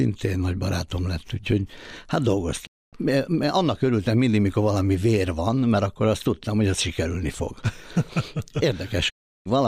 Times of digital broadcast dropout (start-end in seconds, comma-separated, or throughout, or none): 2.65-2.95, 9.08-9.47